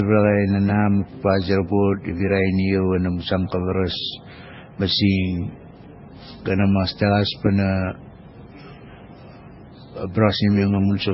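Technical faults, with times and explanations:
Throughout, transcoding between lossy codecs: likely repeated low-bitrate encoding, MP3 then AAC then MP3 again, stacks the artefacts of each codec and removes everything above 5.6 kHz.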